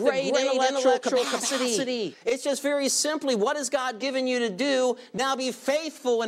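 From the very start until 2.14 s, every sound is heard twice. A second, full-band copy trails the first by roughly 300 ms, at about the same level, with no decay or room colour, so it sounds like a hard, dry echo rather than reverberation. At 2.14 s the copy stops abruptly. This doubled audio track is likely caused by the same signal being captured again through a slower path, or by an edit leaving two misaligned copies in the mix.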